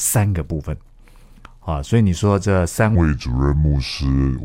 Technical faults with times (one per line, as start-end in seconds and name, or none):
2.95-4.45 section at the wrong speed